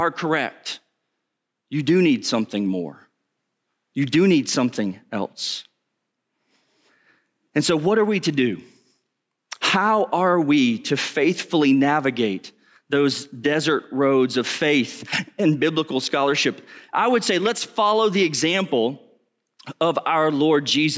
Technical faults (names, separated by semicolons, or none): gain pumping